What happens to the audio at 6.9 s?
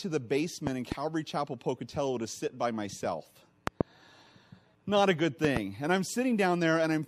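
Nothing goes wrong at 6.9 s; the speech there plays through intact, with no dropout, click or distortion.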